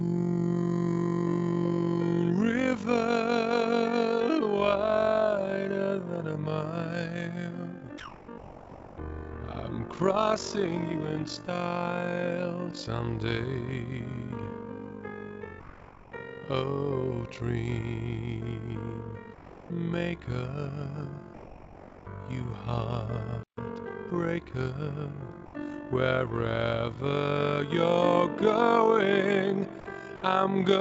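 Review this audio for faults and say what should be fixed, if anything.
An overlap-add ripple runs through the entire clip, pumping the level by about 11 dB around 50 times a second. Frames are being rejoined with windows whose overlap doesn't sum to constant gain, giving a rough, robotic flutter. The waveform envelope shows a regular scalloped comb, and the spectrogram shows vertical striping at that rate. Use a window and hop pair that satisfies the constant-overlap-add condition, such as Hann at 50% overlap.

Comfort noise replaces the background at 7.98–8.28, 15.60–16.12, 19.34–19.70, 21.34–22.06 and 25.46–25.54 s, likely from discontinuous transmission. The textured ambience gives way to flat, featureless hiss, level-matched in the first gap and about 3 to 4 dB quieter in the others. On a spectrogram these look like smooth, uniform patches. Tune the comfort-noise spectral updates so they track the real background more closely.

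Sound is likely dropped by the voice detector at 8.38–8.98 s, where about 240 ms of real sound is lost to steady noise. It happens again at 29.80–29.86 and 30.16–30.22 s, each time losing about 60 ms. The waveform shows the sound's envelope cut abruptly into a low, even noise floor. Lower the detector's threshold and extend its hangover time so quiet tails aren't classified as background.

A playback stall at 23.43–23.57 s silences the output for about 140 ms mid-flow. The player's buffer likely ran dry. The waveform shows a flat, silent gap, and the spectrogram shows a blank vertical band across all frequencies. Enlarge the playout buffer or keep the audio thread from being blocked.

Time-compressed catch-up follows the stall from 23.57 to 24.13 s, playing at 1.25x with unchanged pitch as small pieces are cut out and cross-faded. The spectrogram shows events packed closer together with occasional smeared joins. 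Spread backlog recovery over a longer span so the speed-up stays gentler.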